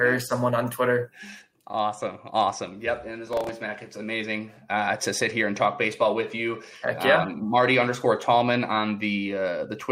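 At 3.27 s a burst of processor overload crackle kicks in and runs to 3.49 s. The processor keeps missing its deadlines on what sounds like very short buffers, a few milliseconds each, and several in a row replay stale audio with hard edges, giving a gritty tearing that stops once the load eases.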